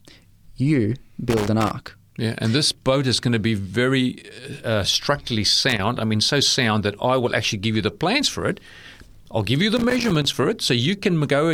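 Loose connector crackle breaks up the speech three times: 1.29 to 1.71 s, 5.69 to 5.79 s between "very uh uh structurally" and "I mean so sound", and 9.77 to 10.34 s after "I'll give you the". A worn contact intermittently breaks the signal path, causing irregular scratchy bursts.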